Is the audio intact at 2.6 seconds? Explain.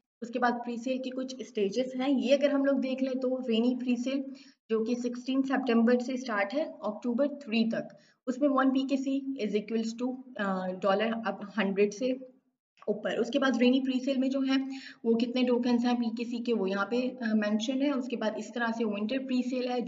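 Yes, at 2.6 seconds the audio is intact, with no dropout, click, distortion or other fault to be heard at that moment.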